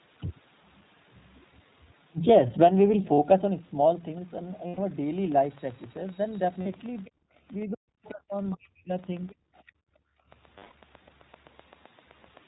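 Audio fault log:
throughout: iLBC codec. The speech is band-limited with nothing above 4 kHz, and has a plainly audible rough, slightly synthetic edge. Each short frame's excitation is coded on its own at a low rate, which fits the 15.2 kbps mode with 20 ms frames.
3.14–3.19 s, 4.68–4.79 s, 6.62–6.67 s, 10.58–10.72 s: lost iLBC frames. Each gap becomes a held, faintly buzzy vowel-like sound lasting 40, 100, 40 and 140 ms. The decoder repeats the last pitch cycle with added noise, then the voice snaps back cleanly because frames stand alone.
5.18–12.38 s: train of clicks. Regular ticks of much the same shape, about 7.8 per second, roughly fifty in all, peak near the level of the speech itself and carry on through the pauses. The likely cause is interference from nearby equipment or a faulty connection or power supply.
7.05–7.10 s, 7.60–7.65 s, 8.05–8.09 s, 8.51–8.57 s, 9.29–9.72 s: other side's voice leaking through. 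A second voice about 30 dB under the talker, mostly in brief scraps and one longer stretch. This is likely loudspeaker echo that the echo canceller did not fully remove from the microphone.
7.10–7.39 s, 9.34–10.30 s: background gated by the echo canceller. The room sound sinks by about 30 dB and then about 28 dB before returning. While the far end played through the loudspeaker, the canceller clamped the microphone down hard, taking the background with it, and let go afterwards.
7.67–8.92 s: speech suppressed in double talk. The talker's voice dips and cuts out in pieces, by as much as about 40 dB over roughly a second, while the other side is also talking. Likely both were speaking together and the echo canceller, unable to separate them, turned everything down.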